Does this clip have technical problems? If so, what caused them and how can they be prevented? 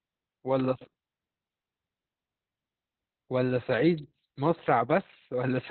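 Yes. Opus voice compression throughout: heavy SILK narrowband coding, which fits about 8 kbps, cuts everything above 4.2 kHz, leaving speech muffled and hoarse. Prevent by encoding at higher bitrate.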